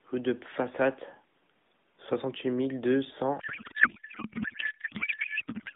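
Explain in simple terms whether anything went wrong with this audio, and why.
Right after "mille deux", at 3.40 s, a codec payload misread kicks in on this phone-band AMR speech: the receiver unpacks the bits in the wrong layout, so everything to the end turns into garbled warble.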